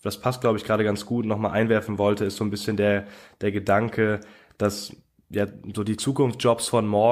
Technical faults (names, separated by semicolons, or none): none